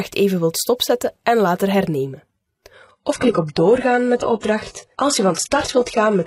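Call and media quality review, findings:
Adaptive stream at a lower bitrate, 2.73 s to end: sudden treble loss above 11.4 kHz, no gap. Fits a low-bitrate HE-AAC rendition, not a dropout or filter.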